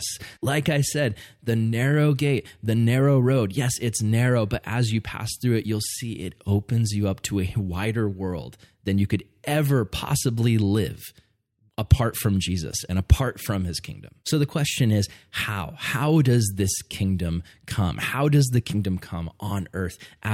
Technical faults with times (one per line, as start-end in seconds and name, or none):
none